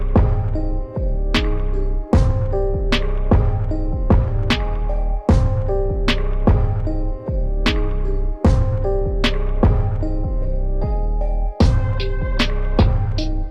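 There are no technical faults to describe, at any point in time.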